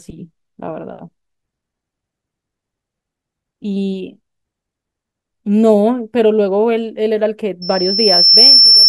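Loudspeaker feedback squeal from 7.62 s to the end: the microphone re-amplifies its own loudspeaker, and a 5.4 kHz tone swells over about a second to roughly 10 dB above the speech.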